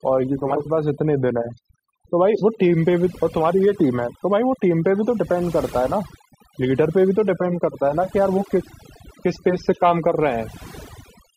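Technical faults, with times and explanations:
Throughout: overdone noise removal. The noise reduction stage is set far too aggressively for this speech recording, so any frequency band sitting close to its noise estimate is pulled down hard or gated off entirely. The quieter, low-level parts of the voice fall into that range and are stripped away with the noise. Between phrases the background collapses to near silence dotted with twinkling specks.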